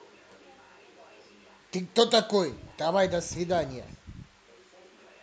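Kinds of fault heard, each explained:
Nothing stood out on listening to the speech here.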